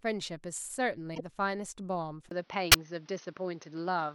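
At 1.15 to 1.21 s a corrupt frame was decoded: flipped bits misplaced energy for one frame, giving a brief chirp that shows as an isolated smear of misplaced energy on a spectrogram. From 1.43 to 2.18 s come CD scratch ticks, four regular clicks where unrecoverable samples were patched, the longest a couple of milliseconds long, visible as thin vertical spikes in the waveform. At 2.29 s a gap of 20 ms is followed by duller, boxier sound. The likely cause is the input switching to a poorer device. On a spectrogram everything above 6.3 kHz disappears, the level shifts by roughly 5 dB, and a new noise floor sits around 35 dB below the signal. At 2.72 to 2.75 s another corrupt frame decoded, over a couple of frames, gives a short blip that appears as a brief misplaced burst on the spectrogram.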